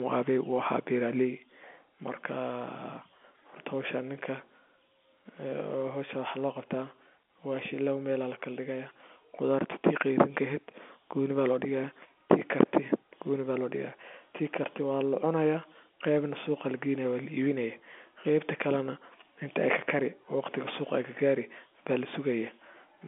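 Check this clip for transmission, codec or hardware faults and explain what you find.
No transmission, codec or hardware faults turn up in this speech clip. It sounds like the G.711 telephone coding path is working as intended, with the sound held to a narrow telephone band of roughly 200 Hz to 3.5 kHz and nothing above about 3.7 kHz.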